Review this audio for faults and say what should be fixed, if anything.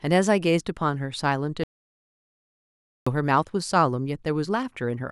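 At 1.64 s the speech cuts off abruptly into silence, returning mid-flow at 3.07 s: an audio dropout to silence losing 1.43 s. Unlike a natural pause, the gap carries no room tone at all, likely from a lost input or mute while recording continued. Secure input connections and monitor the live feed so interruptions are caught and retaken.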